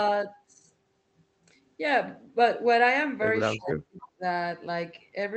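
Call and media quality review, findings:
Speech suppressed in double talk, 3.55 to 4.23 s: the voice dips in pieces, deepest about 35 dB down, around half a second lost in total. Likely cause: the echo canceller's suppressor, faced with both sides talking at once, could not tell near speech from loudspeaker echo and attenuated everything.

Echo leak, 4.0 to 4.07 s: a short, faint scrap of the voice returns 309 ms late, about 25 dB below the speech. Likely a far-end loudspeaker pickup that the remote echo canceller failed to remove fully, sending residual echo back.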